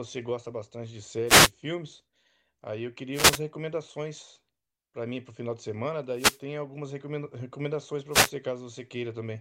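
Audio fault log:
1.26–1.51 s, 3.13–3.41 s, 6.14–6.41 s and 8.10–8.31 s: wireless microphone noise hits. Each is a short burst of static lasting about a quarter second. The radio signal fades as reflections cancel, so receiver noise rises.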